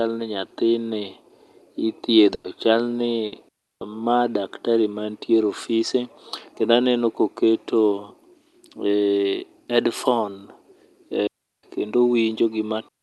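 It's a speech clip with a few network and radio-link problems. There's a burst of packet loss at 2.34 to 2.45 s and again at 3.27 to 3.33 s. The receiver keeps stretching the last bit of sound and fading it down, for about 100 ms and then 50 ms, so the speech jumps ahead with that stretch gone. Then there are two digital wireless dropouts, at 3.49 to 3.81 s and 11.27 to 11.63 s. Each is a clean mute of roughly a third of a second, about 330 ms and 360 ms. That's the link losing too much data, and you get a near-silent hole with no noise burst on either side. Also, at 10.30 to 10.32 s there's a short concealed packet loss. Only about 10 ms of audio went missing, patched by continuing the preceding sound and blending back, so it comes across as a tiny smear or wobble in the speech.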